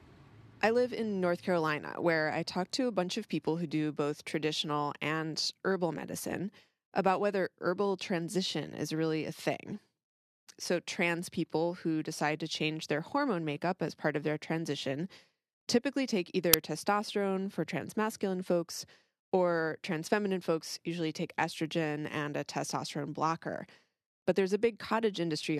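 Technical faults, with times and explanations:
16.54 s, uninitialised buffer: just after "typically take" and before "testosterone for transmasculine folks", a 5 ms block of speech is replaced by a sharp, loud crack. The block was sent to playback before any audio had been written to it, so whatever values were left in memory came out as samples.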